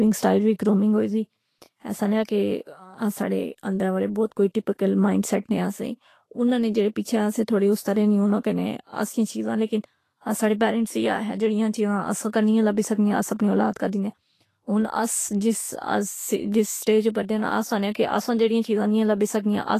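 Throughout the speech, the treble is grainy and hissy, and consonant attacks sound smeared. Nothing is present above 14.2 kHz. This is likely Vorbis compression, at a rate that sounds near 35 kbps, where coarse quantisation turns fine detail into noise.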